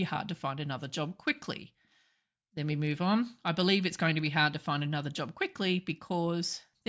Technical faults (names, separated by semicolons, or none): none